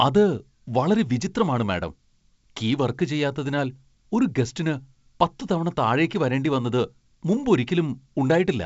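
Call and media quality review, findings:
No findings in this call and media quality review.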